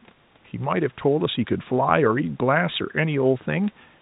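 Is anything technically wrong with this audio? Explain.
No, nothing here is technically wrong: the speech comes through G.711 telephone coding with its expected ceiling at 4 kHz, and the room noise sits about 36 dB below the voice as part of the original recording.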